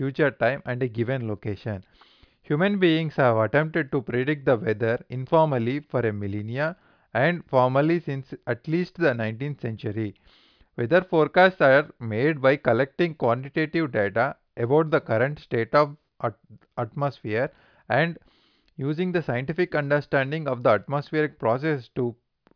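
Nothing in this speech recording stands out as a technical fault, so there's nothing to flag here.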